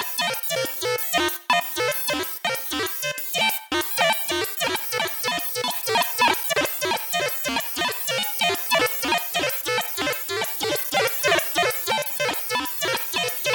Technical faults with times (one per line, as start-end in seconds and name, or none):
none